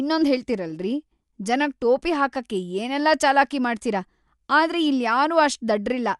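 Throughout the speech, nothing reaches above 11.6 kHz, so the sound is dull, with a rough, fluttering grain around voiced tones. This is likely Dolby Digital compression at a low bitrate, consistent with 64 kbps, where starved frequency lines are filled with noise.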